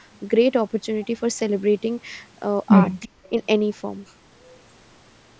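From 3.02 to 3.29 s there is an echo leak, likely from a far end playing the call over a loudspeaker whose echo canceller let part of the microphone pickup slip through and return down the line. The sound is a faint delayed copy of the speech, trailing it by about 0.36 s and sitting roughly 25 dB beneath it, a brief ghostly repeat rather than a clear second voice, band-limited like the rest of the call audio to nothing above 8 kHz.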